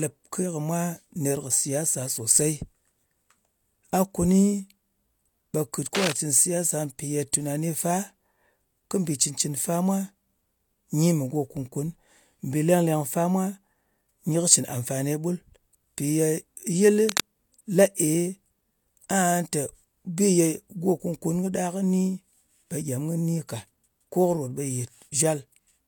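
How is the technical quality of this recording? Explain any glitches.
The recording has two kinds of glitch: cable scratch noise appears twice and pre-echo once.

Cable scratch noise occurs from 5.95 to 6.12 s and from 17.01 to 17.21 s. The likely cause is a worn cable, connector or control carrying a DC voltage being moved, so its contact resistance jumps around rapidly. Each time, dense and irregular bursts of noise ride over the speech for about 0.2 s, at roughly 5 dB below the speech level, heard as brief scratching or rustling.

Pre-echo occurs at 7.32 s. The transform codec spreads quantisation noise across a whole block. Here a sharp attack landed late in a block, so noise scaled for the loud part also filled the quiet instant before it. The result is about 12 ms of hiss just ahead of the attack, which then sounds softened or smeared rather than crisp.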